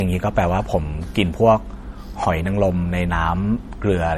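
Throughout the speech, the high end sounds smeared and watery, and nothing is present above 19.6 kHz. This is low-bitrate audio saved at a high bitrate, likely an MP3 near 48 kbit/s re-encoded at about 320 kbit/s. The larger second file cannot restore the detail the first encoding removed.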